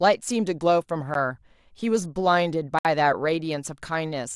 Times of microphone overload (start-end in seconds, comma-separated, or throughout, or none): none